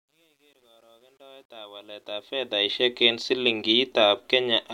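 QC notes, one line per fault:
0.00–2.84 s, truncation distortion on the fade-in: the quiet start turns gritty, worst to 1.92 s, which fits an undithered stage of about 11 bits, unlike a clean, smooth fade.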